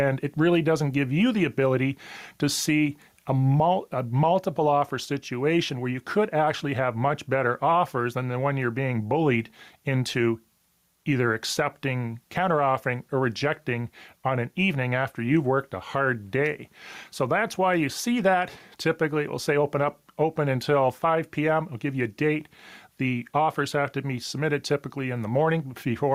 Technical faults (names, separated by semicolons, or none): gain pumping